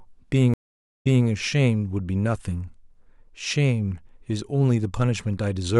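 A stream reconnect hits at 0.54 s. The speech drops to silence for 489 ms while the link re-establishes, then a freshly started decoder resumes 235 ms earlier than the break, so a short stretch repeats, easing back in by 1.26 s.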